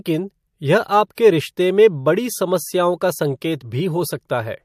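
From 1.15 to 1.18 s the speech has pre-echo: a brief hiss, roughly 27 ms long and about 26 dB above the quiet floor, that arrives just before a sharp attack and blurs its edge. The transform codec spread quantisation noise across a block of about 36 ms, and the way the noise fills the gap suggests it never switched to short blocks. Reverberation or ringing trails after a sound, but this noise comes before the attack.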